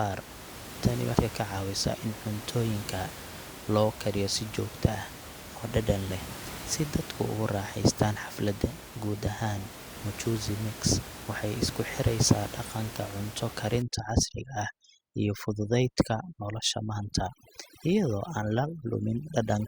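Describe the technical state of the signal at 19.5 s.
At 19.5 s the signal is affected by overdone noise removal, which begins at 13.82 s and runs to the end of the clip. The room noise, about 14 dB below the speech, is being treated as something to erase: frequency bands near that noise level are pulled almost to nothing, taking the quiet parts of the speech with them. Between phrases the background becomes near silence dotted with twinkling specks. Unlike a dropout, the whole signal never cuts out at once.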